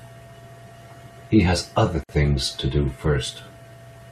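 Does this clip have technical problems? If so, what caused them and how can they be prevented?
Yes. A gap at a join of encoded pieces runs from 2.04 to 2.09 s. About 54 ms of encoder start delay and end padding was left untrimmed, so the speech stops abruptly, then resumes where it left off. To prevent it, encode the audio as one continuous stream, or trim each piece's encoder delay and padding before joining.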